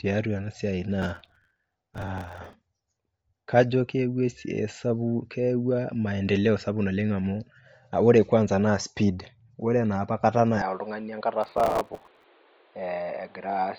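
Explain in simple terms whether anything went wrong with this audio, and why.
Processor overload crackle appears twice, from 1.02 to 2.53 s and again from 11.43 to 12.24 s. During these stretches the computer handling the audio fell behind. The sound is processed in tiny slices of about 5 ms each, and when a slice wasn't ready in time, a scrap of older audio was played in its place. Dozens of these misses over each stretch, each with a hard edge, pile up into a gritty crackling layered over the speech.

Input switched to a poorer device happens at 10.62 s and lasts to the end of the recording. The speech suddenly turns duller and narrower, with nothing above about 4.7 kHz. It also drops somewhat in level and picks up a faint new background hiss. There is no gap at the change, so the sound simply shifts character in an instant. That sudden change likely means the recording jumped to a lower-quality microphone, such as a headset's call mode.

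Bluetooth LC3 compression affects the whole recording. The speech has a breathy, grainy edge and loses all its sparkle above about 7.7 kHz. LC3 is the codec used by newer Bluetooth audio. It squeezes the sound in short chunks of 10 ms, discards most of the high-frequency detail, and fills that range with noise instead. At a setting this tight, that trade-off is clearly audible, which points to likely Bluetooth transmission at low quality.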